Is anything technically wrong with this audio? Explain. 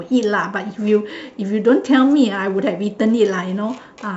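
No, nothing technically wrong is audible anywhere in this speech recording.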